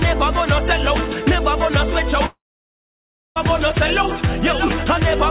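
A likely long network dropout starts at 2.26 s: packets stop arriving, and the receiver fills the gap by stretching the last sound it had, which turns into a brief fading buzz before giving way to about 0.98 s of silence. Sound resumes at 3.38 s with roughly 1.1 s simply gone. Throughout the clip, on the call path, nothing reaches above 4 kHz, which fits a 64 kbps G.711 A-law codec.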